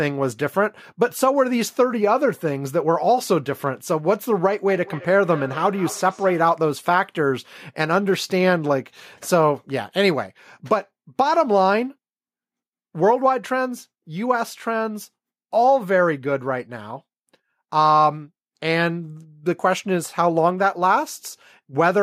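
From 4.68 to 6.58 s there is feedback echo between two devices: a second device on the same call replays this microphone's signal, which is picked up again. The speech returns roughly every fifth of a second, thin and ringing, about 17 dB below the direct sound.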